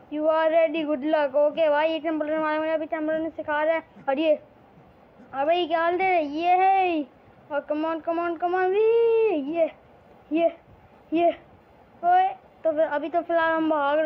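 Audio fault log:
Nothing stood out on listening to this audio.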